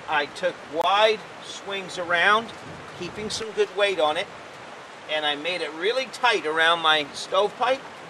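At 0.82 to 0.85 s the sound cuts out abruptly for roughly 23 ms and resumes further along, as though it had kept playing through the gap. This is likely a Bluetooth dropout, where a packet missed its delivery deadline and was discarded, which fits the loss of a single codec frame.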